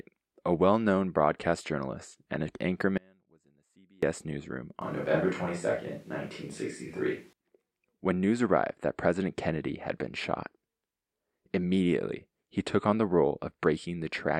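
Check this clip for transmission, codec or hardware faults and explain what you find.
Two faults are present in this speech clip.

From 2.98 s to 4.03 s, right after "broadcast journalist and an", there is an audio dropout to a faint residue. About 1.05 s of signal vanishes abruptly, leaving only faint sound roughly 35 dB down. The likely cause is a brief loss of the signal while the path after it stayed live. The waveform collapses to a thin band with sharp edges, and the spectrogram goes nearly blank.

From 4.82 s to 7.33 s there is a switch to a distant microphone, likely because the close microphone's feed failed and a farther one took over. The speech turns roomy and hollow with thinner bass, at much the same level, and room noise sits around 35 dB below it. On a spectrogram the low end weakens and reverberation smears the harmonics, with abrupt boundaries at both ends.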